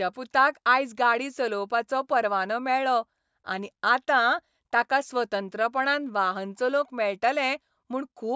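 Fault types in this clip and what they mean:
No technical faults are audible anywhere in the speech recording.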